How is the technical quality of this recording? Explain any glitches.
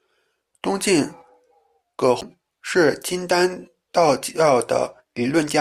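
There is one glitch. At 2.21 s, just before "是金丹道", a CD skip: the laser jumped tracks, giving a tick, a mute of a few milliseconds, and a displaced restart. The waveform shows a brief gap and a vertical click line on the spectrogram.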